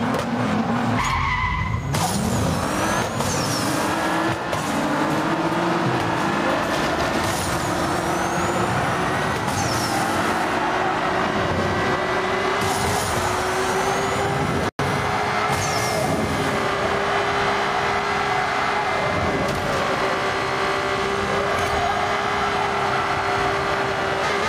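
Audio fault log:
Throughout: gain pumping. The gain swings about 5 dB, squashing loud and soft parts closer in level. Likely cause is excessive input gain hitting a fast limiter.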